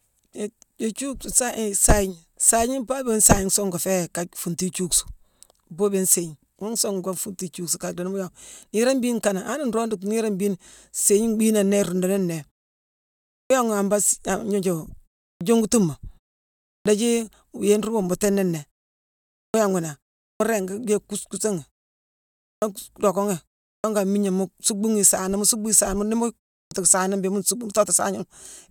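Clipped start after a pause at 13.41, 15.32, 16.77, 19.45, 20.32, 22.53, 23.75 and 26.62 s (before "saana mbéé mu nsuuckbu"): the output wakes late, shaving 82 to 93 ms off each onset.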